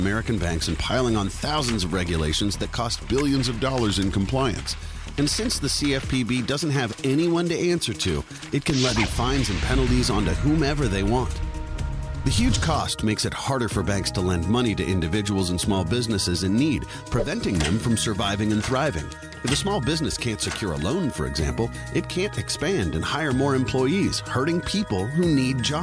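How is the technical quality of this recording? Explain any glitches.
There is one glitch. From 3.06 to 4.69 s the recording has a wrong sample rate problem. For that stretch the samples are clocked out more slowly than they were captured, with no conversion in between. Speed and pitch therefore drop together. The sound runs at about 0.919 times normal speed and sits about 1.47 semitones low. That ratio fits 24 kHz material played back at 22 kHz. The passage sounds slightly slow, heavy and flat.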